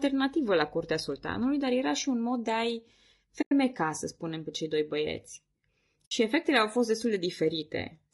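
From the start the speech sounds rough and grainy, with hiss filling the gaps between harmonics. This is low-delay AAC compression, likely AAC-ELD at around 32 kbps. Its short frames blur pitch detail, and a spectrogram shows smeared, noisy harmonic bands.

From 3.41 to 3.52 s, about 100 ms, and from 6.05 to 6.12 s, about 60 ms, the sound fades into a soft silent hole. This is AAC frame loss with muting: the decoder zeroed the missing frames. The waveform tapers to flat and back, and a spectrogram shows clean vertical gaps.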